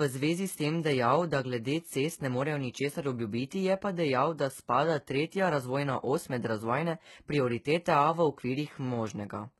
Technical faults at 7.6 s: HE-AAC compression

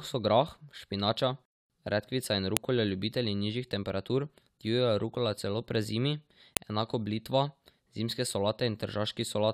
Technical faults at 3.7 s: none

